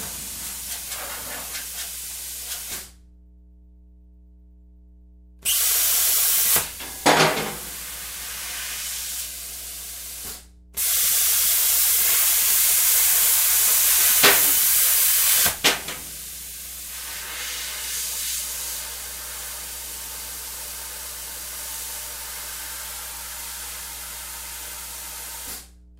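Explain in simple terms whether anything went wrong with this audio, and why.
Yes, something went wrong. There is mains hum from start to finish. A steady low tone at 60 Hz sits under the sound. Power from the wall leaked into the recording, through a ground loop or from a nearby transformer.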